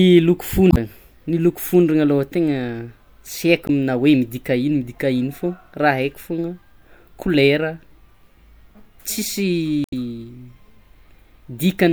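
Three brief faults break into this speech recording, at 0.69 to 0.77 s, 3.66 to 3.70 s and 9.83 to 9.93 s, each lasting a tenth of a second or less. They come from damaged data in a compressed stream. Part of the encoded data is corrupt at these points, so the decoder misreads those frames, loses sync and searches for the next valid frame header.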